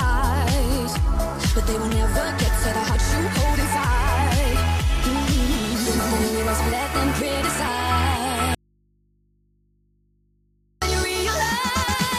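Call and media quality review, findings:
Audio dropout to a faint residue, 8.55–10.82 s (about 2.27 s). Signal cuts abruptly; gap holds only mains hum, roughly 45 dB below signal. Likely input path briefly lost while capture stayed live. Spectrogram: sudden blank band, thin hum lines persisting; waveform collapses to near-flat.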